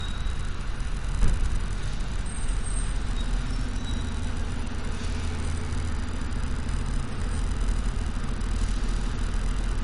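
From start to finish the audio stops dead at about 10.6 kHz, a flat ceiling across the whole spectrogram, with the smeared, swirly artefacts of a starved MP3 encode. This is likely low-bitrate audio saved at a high bitrate: a roughly 49 kbit/s encoding re-saved at 320 kbit/s, which cannot restore what was lost.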